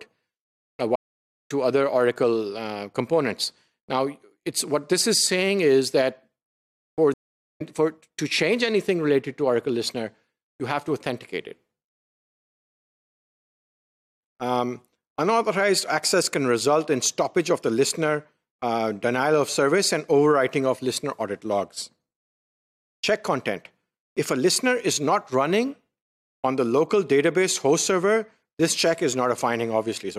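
Two stream reconnects occur, at 0.96 to 1.51 s (514 ms of silence) and 7.14 to 7.61 s (434 ms). Each time the connection drops, a fresh decoder starts, and the sound resumes about half a second further on. That skipped material, rather than a simple pause, separates it from a buffer underrun.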